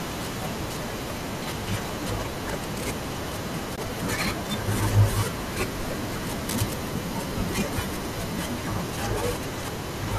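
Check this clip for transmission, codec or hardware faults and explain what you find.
Two faults are audible in this speech clip: a brief muted dropout and a burst of scratching noise.

AAC frame loss with muting occurs at 3.76 to 3.78 s. About 20 ms of audio went missing, which fits two lost 10 ms low-delay AAC frames. The decoder replaced their spectral content with silence. Because the overlapping synthesis windows taper the surrounding frames, the speech fades out and back in rather than cutting hard. The result is a short, soft-edged gap in the speech.

Cable scratch noise runs from 6.49 to 6.74 s, roughly a quarter of a second. It sounds like irregular crackling and rustling layered over the speech, sitting only a little below the speech level. The likely cause is a worn cable, connector or control being disturbed, so that its contact resistance fluctuates rapidly. Those fluctuations modulate the signal path and inject dense, uneven noise bursts until the contact settles again.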